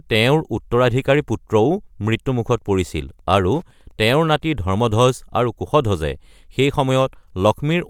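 It's a speech recording, and between 2.51 s and 4.77 s there's Wi-Fi interference: a steady tick every 102.4 ms, roughly ten a second, sitting around 45 dB below the speech. That's a nearby Wi-Fi radio's beacon being rectified by the audio circuitry.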